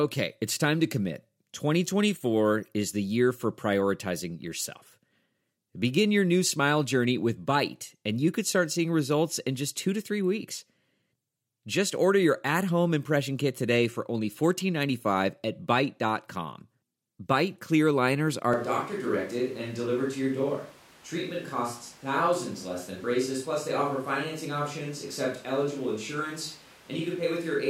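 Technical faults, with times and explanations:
18.53 s to the end, switch to a distant microphone: just after "clear liners are", the close microphone's feed most likely drops out and a microphone further from the speaker takes over. The speech turns hollow and roomy at once, with thinner bass and a level about 5 dB lower. Background noise rises to roughly 25 dB below the speech, because the distant pickup hears more of the room. The clip never switches back.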